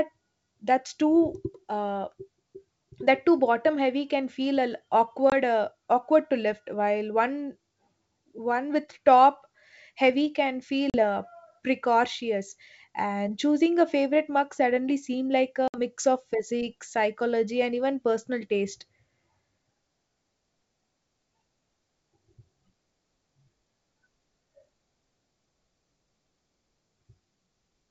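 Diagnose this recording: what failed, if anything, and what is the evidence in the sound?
Network-stage packet loss on an ADPCM call at 5.30, 10.90 and 15.68 s leaves hard-edged silent holes of 20, 40 and 60 ms, roughly one to three packets. The decoder's predictor and step size drift from the sender's, so speech resumes slightly distorted.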